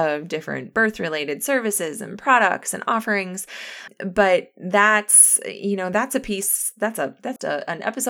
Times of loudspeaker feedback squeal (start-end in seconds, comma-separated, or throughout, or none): none